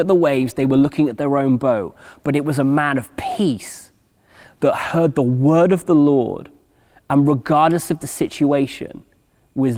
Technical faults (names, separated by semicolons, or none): none